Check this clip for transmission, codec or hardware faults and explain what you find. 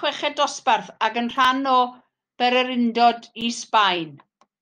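There is one fault in this speech: a block of digital silence at 3.41 s. The sound drops abruptly for about 7.2 ms and returns with no fade, giving a sharp tick. The output buffer was likely not filled in time, so zeros went out instead.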